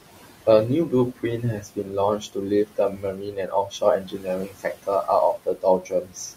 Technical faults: noise suppressor artifacts; speech cut by the noise suppressor

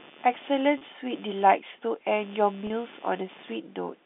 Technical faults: computer activity noise; packet loss with pitch repetition

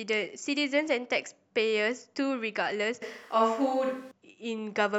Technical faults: switch to a distant microphone

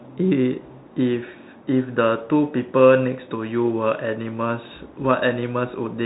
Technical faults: Bluetooth CVSD headset codec

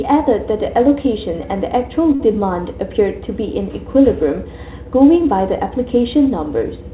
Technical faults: short stall from a late packet

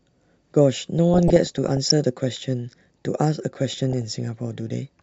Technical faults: DAB burbling

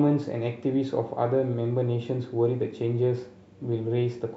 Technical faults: none

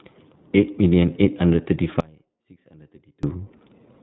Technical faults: iLBC codec; lost iLBC frames; audio dropout to a faint residue

